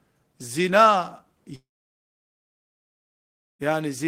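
A long network dropout is the likely cause at 1.55 s: no audio reached the receiver until 3.62 s. The receiver stretches the last sound into a brief fading buzz, then about 1.95 s of silence follows, and the speech resumes with 2.04 s missing.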